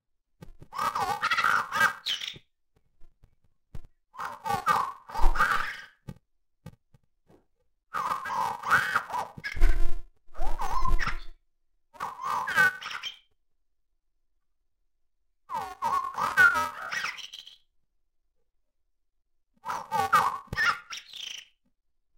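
Interleaved audio read as planar runs from start to finish. Each short block of alternating left and right samples has been split down the middle, so its first half plays as the left channel and its second half as the right, each at half speed within the block. With blocks about 2.9 ms long, which fits a 128-sample block, there's no clear octave drop. Instead the sound turns dull and robotic, with a steady buzz at about 345 Hz, the block rate.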